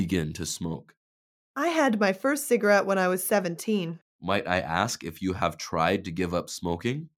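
Nothing stood out as a technical fault on listening to the audio.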